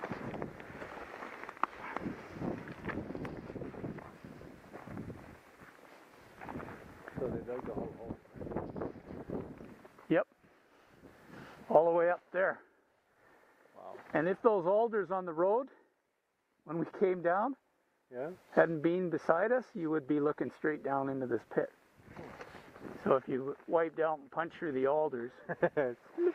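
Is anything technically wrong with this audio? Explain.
No, nothing technically wrong can be heard here.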